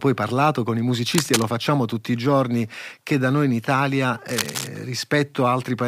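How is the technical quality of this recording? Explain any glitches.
The recording has two brief bursts of cable scratch noise. From 1.15 to 1.42 s, between "parlato con i" and "facciamo tutti i giorni", and again from 4.29 to 4.67 s, a dense, uneven scratching rustle sits over the speech, only a little quieter than the speech itself. This is likely a worn cable, connector or control being moved, its contact resistance fluttering rapidly and adding ragged noise to the signal.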